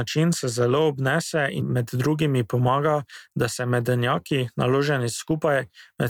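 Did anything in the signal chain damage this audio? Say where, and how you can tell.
No, nothing in the signal chain has left an audible mark on this speech recording. There is no point in the clip where any stage, from capture through to playback, can be heard altering the sound.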